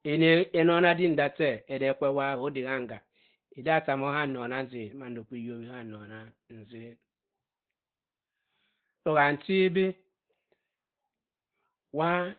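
Speech, muffled and hoarse throughout with nothing above 4.5 kHz, likely heavy Opus compression in its narrowband speech mode, fitting a bitrate around 12 kbps.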